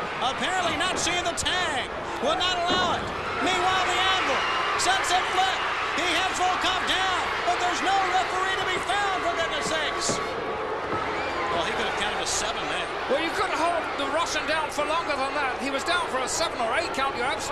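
Nothing stood out as wrong on listening to this recording.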